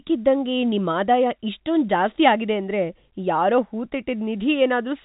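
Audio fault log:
Nothing stood out on listening to this telephone-band speech.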